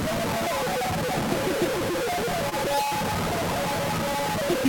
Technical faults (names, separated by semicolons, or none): low bit depth without dither; short concealed packet loss